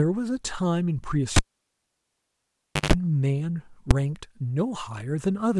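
A speech clip with two separate faults. From 1.36 s to 2.93 s the cable is pulled and plugged in: a pop opens the dropout, the signal falls to near silence for about 1.5 s, then a 154 ms burst of 50 Hz mains buzz appears while only the plug tip makes contact, and a second pop marks the sound returning. On a waveform this shows as two sharp spikes bracketing a flat line with a short dense hum section before the end. On a spectrogram the two pops are vertical broadband streaks, with bright horizontal lines at 50 Hz and its harmonics during the buzz. At 3.91 s there is a single bang from invalid numbers at full scale. A calculation produced infinite or invalid values that were forced to maximum amplitude for about 5 ms, which fits a 128-sample processing block. On the waveform it is a short rectangular slab held flat at one extreme value, far beyond the speech peaks. On the spectrogram it is a thin full-height vertical bar.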